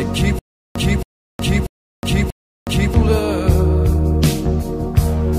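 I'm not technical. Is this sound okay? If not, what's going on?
No. From 0.39 to 2.94 s, a short burst of about 0.27 s repeats four times with silent gaps between: stutter with silent gaps, likely from playback stalling and retrying.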